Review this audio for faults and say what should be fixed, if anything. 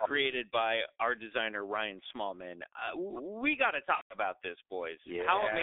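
The whole clip runs through the G.723.1 codec, and it's heavily damaged. The band stops around 300 Hz at the bottom and 3.6 kHz at the top, so speech comes out muffled and hoarse, with smeared consonants. That fits the low 6.3 kbit/s mode, where the slow-updating voice model can't keep up. Moving to a wideband codec at a healthier bitrate would fix this.

From 3.95 to 4.14 s there's VoIP packet loss concealed by the speech codec. The decoder stretched its last pitch and filter with falling gain, then muted from the third lost frame in a row. The 150 ms of lost audio fits five lost 30 ms frames, and the speech sounds weak for a moment after it. A jitter buffer with some redundancy or FEC on the link would help here.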